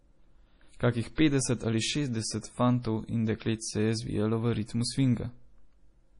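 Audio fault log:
throughout, MP3 compression: The speech is band-limited, with nothing above about 10.6 kHz, and the damage is heavy. Weak spectral detail flickers in and out between frames, giving a watery, swirling texture, and sibilants come out with metallic chirps. The hard treble cut-off and the depth of the artefacts fit a bitrate around 32 kbps, which likely means a heavily compressed MP3 encode where the encoder starved the upper band to save bits.
1.15 to 1.18 s, pre-echo: A short hiss runs ahead of a sharp attack for about 27 ms, and the onset itself sounds softened rather than crisp. The codec shares its quantisation noise across the whole transform block, so noise sized for the loud transient also fills the quiet stretch just before it. Because the attack lands late in the block, that noise is exposed and heard as a smeared lead-in.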